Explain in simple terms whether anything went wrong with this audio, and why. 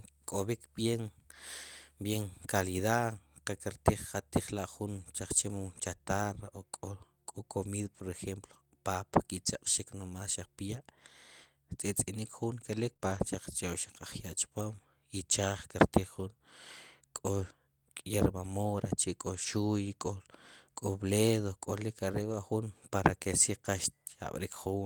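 Yes, the speech has network packet damage in two places.

Lost packet rebuilt from error correction: from 12.85 to 12.91 s, 13.01 to 13.24 s and 22.20 to 22.34 s, pieces of the call arrived missing, but the following data carried a cheap backup copy of each one. The receiver played those copies, so nothing drops out. They just sound rougher and grainier for those 40, 120 and 80 ms.

Short concealed packet loss: inside the same rough patch, at 12.93 to 13.08 s and again at 12.97 to 13.01 s, 20 ms stretches never arrived at all, with no backup copy. The receiver filled them by stretching out the sound that came just before, for 14 and 21 ms, then blending back into the real audio. This gives a brief smear or wobble, and the first fill pushes the timing out by roughly a hundredth of a second.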